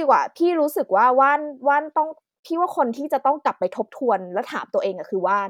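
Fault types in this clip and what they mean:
No faults can be heard in this recording.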